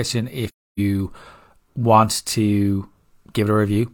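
Speech, with AAC frame loss with muting from 0.48 to 0.8 s: the decoder zeroed missing frames, leaving a faded gap that appears blank on the spectrogram.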